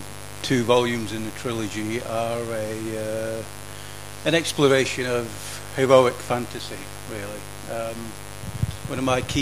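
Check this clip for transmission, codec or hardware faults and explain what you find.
There's one fault here: mains buzz running the whole way through. Sharp switching spikes from something like a dimmer or rectifier are getting in at 50 Hz, so you hear a steady, raspy buzz with harmonics climbing into the kilohertz range. It sits fairly high, not far under the wanted sound.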